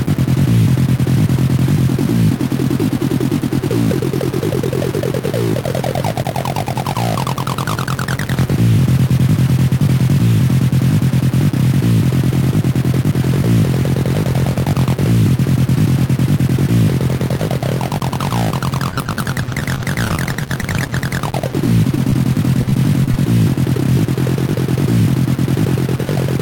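Throughout the clip, the samples were likely cut down to about 4 bits by truncation with no dither. The rounding error tracks the signal, sitting roughly 15 dB below it, so the sound carries a grainy, signal-following distortion.

From 18.89 to 22.24 s, and again from 22.61 to 23.14 s, there is repeated packet loss. Lost audio was patched by stretching the preceding sound, 32 gaps in the first stretch (up to 24 ms each) and 7 in the second (up to 17 ms), leaving choppy, robotic sound with pieces missing.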